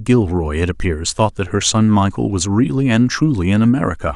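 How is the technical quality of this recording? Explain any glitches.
No technical faults can be heard anywhere in the recording. There are no glitches to explain.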